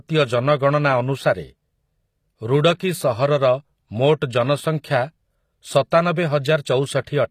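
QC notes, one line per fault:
throughout, HE-AAC compression: likely an encode around 24 kbps rebuilding treble from copied lower bands, so s sounds turn gritty and metallic, with nothing above 14.9 kHz.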